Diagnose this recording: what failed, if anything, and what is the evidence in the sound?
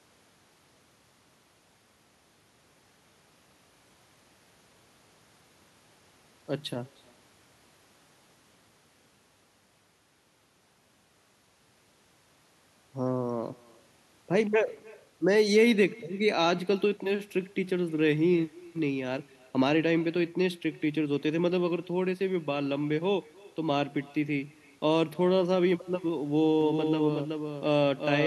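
The call processing failed to cancel echo: the far end played the call on a loudspeaker, its microphone picked it up, and no echo canceller removed it before it returned across the network. Throughout the recording, every stretch of speech is shadowed around 300 ms later by a faint, thin copy, about 26 dB below the talker. The fixed round-trip delay marks this as echo with no canceller, not a local reflection.

From 26.61 s to the end, a doubled audio track appears. A second full-band copy of the speech runs a few dB below the original and trails it by roughly 400 ms. Unlike the echo, it has no room colour or decay. It begins abruptly at 26.61 s and lasts to the end. The cause is likely a second, slower capture path or an edit that left two out-of-step copies overlapping in storage or mixing.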